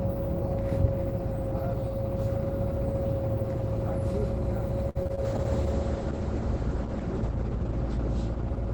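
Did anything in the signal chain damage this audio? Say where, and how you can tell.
Yes. From 4.89 to 5.19 s the sound breaks up into a choppy stutter: repeated packet loss at the network stage, with four gaps of up to 57 ms. The decoder patched each one by extending the previous sound, so about 39% of that span is concealment. Smeared fill rather than silent holes separates this from plain dropouts.

From 5.27 s onward a call bitrate drop sets in at the codec stage. The top end collapses from about 20 kHz to 8 kHz, and the texture turns coarse and watery, which fits a fall from roughly 32 to 10 kbps, held at its lowest for about 2.5 s. A simple low-pass filter would dull the sound without that grainy coding roughness.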